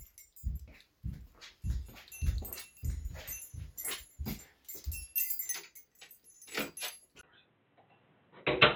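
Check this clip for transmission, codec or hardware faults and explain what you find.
One fault: from 7.21 s to the end, the sound goes dull and boxy with nothing above 4 kHz, likely an input switched to a poorer device. A 20 ms gap, a level drop of about 5 dB and a new noise floor about 35 dB down set it apart from a plain codec bandwidth cut.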